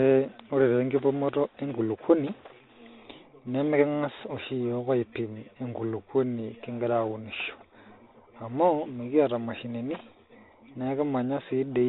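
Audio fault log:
throughout, Bluetooth CVSD headset codec: the speech sits in that narrow headset band with nothing above about 4 kHz, so it sounds boxed-in and dull, which fits the 64 kbps CVSD stream. That codec sends only a single up-or-down bit per sample with a self-adjusting step, so fast, loud high content overruns the step and breaks up, s sounds come out gritty, and a fine grainy hiss runs under the speech. The damage is plainly audible here.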